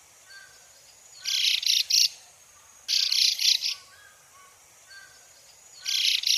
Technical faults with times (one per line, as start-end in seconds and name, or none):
3.22-3.52 hard clipping